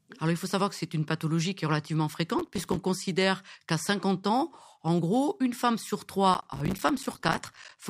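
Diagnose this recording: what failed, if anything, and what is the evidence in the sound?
Gritty crackle tears through the speech from 2.39 to 2.76 s, and again for longer from 6.34 to 7.77 s. This is processor overload crackle at the driver and buffer stage. Buffers of roughly 5 ms kept missing their deadlines, and each miss left a hard-edged silent gap.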